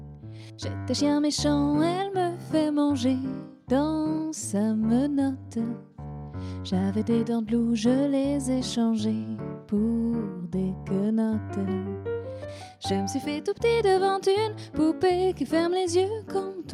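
No audible technical faults anywhere in this recording.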